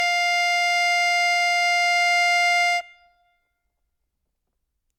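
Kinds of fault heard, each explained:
Generation loss: the music sounds swirly, smeared and hollow throughout, more than a single lossy encode at a moderate rate would give, and transients lose their edge, with attacks softened into the note bodies. The likely cause is repeated lossy coding, about three passes through a codec such as Opus near 64 kbit/s, each requantising on a shifted frame grid so noise and spectral gaps accumulate. Nothing remains above 19.7 kHz.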